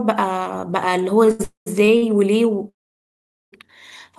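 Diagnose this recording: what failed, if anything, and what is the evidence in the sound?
Short stalls from a late packet at 1.25 to 1.29 s, 1.31 to 1.41 s, 1.85 to 1.89 s and 1.97 to 2.04 s point to the network stage. In each, the speech holds on one sound for 18, 81, 24 and 51 ms. A packet arrived after its playout time, the jitter buffer ran dry, and the receiver stretched the last sound until the packet came. Playback then resumed from the same point, so nothing is lost and the speech runs later by each stretch.

Call audio freezes run from 1.43 to 1.79 s and from 2.69 to 3.54 s. In the first, 229 ms is filled, 130 ms of it silent. In the second, 830 ms is filled, 810 ms of it silent. When speech returns it continues where it stopped, with nothing skipped. The likely cause is packets held up in the network long enough to empty the jitter buffer, with the concealment fading out before they arrived.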